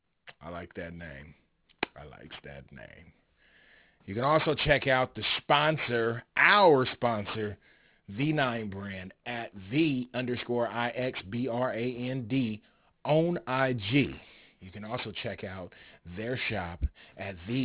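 Throughout, the speech was resampled, which fits a drop to 8 kHz, without an anti-aliasing filter. This aliasing folds content above 4 kHz back down, leaving sibilants gritty and metallic.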